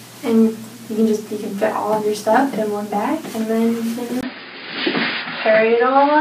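At 4.21 s a 20 ms gap breaks the audio. From there to the end nothing remains above 5 kHz, and faint new background noise appears at an unchanged level. The likely cause is an input switched to a poorer device. The gap and new noise floor distinguish it from simple filtering.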